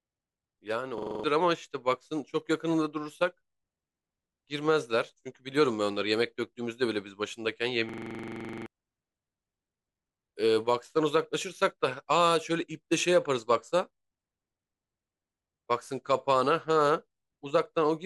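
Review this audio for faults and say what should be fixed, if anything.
Two system hang loops interrupt the speech, at 0.98 to 1.24 s and 7.89 to 8.66 s. Each replays one 42.67 ms slice at 23.4 Hz, a machine-gun stutter that fits a stalled driver leaving a 2048-sample ring buffer cycling. Roughly 0.3 s and 0.7 s are lost. Prevent it by fixing the driver stall and having the output mute on buffer underrun.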